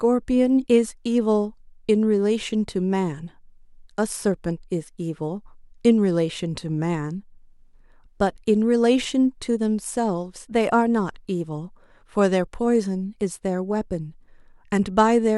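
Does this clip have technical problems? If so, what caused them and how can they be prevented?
No, there are no technical faults to trace here, so there's nothing to prevent.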